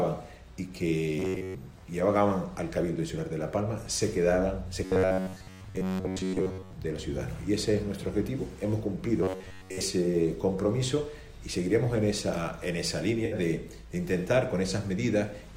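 From 1.20 to 1.55 s, 4.85 to 6.73 s and 9.23 to 9.81 s, a rigid metallic buzz at about 94 Hz replaces the natural sound. This is robotic sound, likely from a roughly 11 ms buffer repeated in place of most of the real audio. At 13.25 to 13.35 s, AAC frame loss with concealment leaves a brief smeared, noisy patch where about 64 ms, consistent with three frames, was filled from the previous spectrum.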